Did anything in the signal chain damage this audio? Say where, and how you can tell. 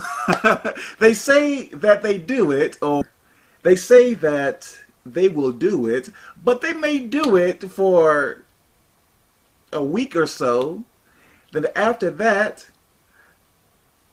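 Yes. At 3.01 s the sound jumps forward with no gap, roughly 0.4 s missing: a network skip ahead, the jitter buffer discarding queued audio.

From 3.11 to 4.42 s and 4.86 to 5.46 s it runs hurried at unchanged pitch, 112% then 108%: jitter buffer speed-up trimming pitch periods.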